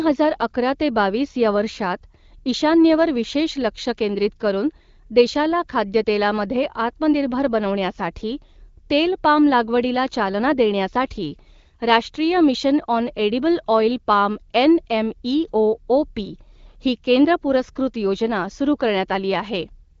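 Nothing goes wrong anywhere in this speech clip: it comes through an AMR wideband (HD Voice) link working as it should at 12.65 kbit/s, with the top end stopping around 7.4 kHz as that codec does.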